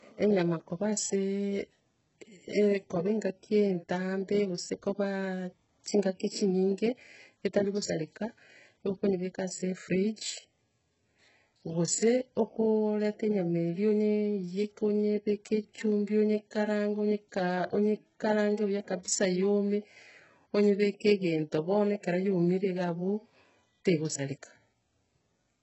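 Speech runs through the whole clip with heavy coding damage. Nothing is present above 8 kHz. The treble that remains sounds synthetic. S sounds come out gritty, metallic or lispy. The likely cause is HE-AAC compression at a very low bitrate, the damage fitting something near 8 kbps. The codec keeps only the lower band and rebuilds the top by copying lower bands upward under a coarse envelope. So the upper harmonics no longer line up with the real ones.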